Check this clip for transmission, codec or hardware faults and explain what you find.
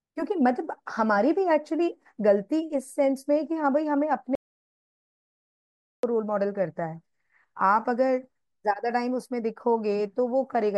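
One fault is present, an audio dropout to silence. From 4.35 to 6.03 s the input was likely lost, through a dropped link or device, while recording carried on writing silence. The speech cuts off abruptly into 1.7 s of dead silence with no room tone, then resumes mid-flow.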